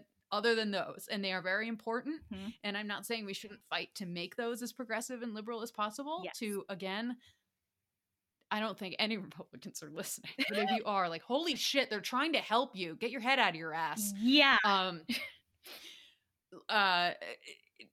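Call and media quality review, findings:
No faults found in this speech recording. Nothing heard calls for follow-up on the call or media path.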